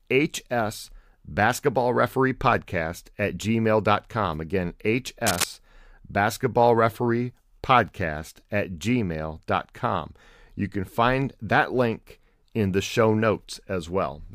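From 5.26 to 5.44 s, a burst of cable scratch noise sits over the speech. It lasts under a fifth of a second. It sounds like scratching or rustling, dense and uneven, at roughly the same level as the speech. The likely cause is a worn cable, connector or control carrying a DC voltage being moved. Its contact resistance jumps about rapidly, and those jumps turn into bursts of noise in the signal.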